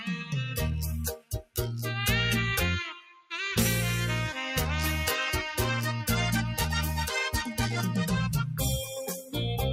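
From the start, a noise suppressor designed for speech is applied to this sound. It treats sustained and ambient content as noise, so the level swings by roughly 5 dB as it engages and releases. The result is an audible pumping, with held material thinning between onsets.

From 1.16 to 1.58 s, the suppressor cuts this sound harder, pulling it down by up to about 21 dB. For around a third of a second, the sound sinks and its decay is cut short. From 2.92 to 3.34 s, the same cut recurs, dropping the sound by up to about 18 dB for roughly 0.4 s.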